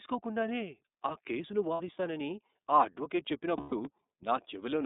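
Throughout the speech, the iLBC codec limits the band to roughly 250 Hz to 3.7 kHz, a pattern that fits its 13.33 kbps, 30 ms-frame mode. The voice sounds plainly rough and synthetic. On a spectrogram, energy stops sharply at 3.7 kHz, with a bare low edge below 250 Hz.

At 1.74 to 1.80 s and again at 3.57 to 3.73 s, there are lost iLBC frames. The decoder filled each gap by repeating the last pitch cycle mixed with noise, producing a held, buzzy vowel about 60 ms and 150 ms long. The spectrogram shows frozen, smeared harmonics, and the waveform shows repeated periods that fade in the longer gap.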